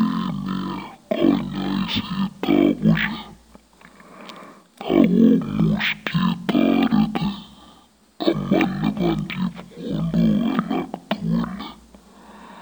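Stereo read as mono runs throughout this speech clip: the interleaved left and right samples are played one after another as a single channel, so every stereo frame becomes two mono samples, and the speech comes out at half speed and a full octave low.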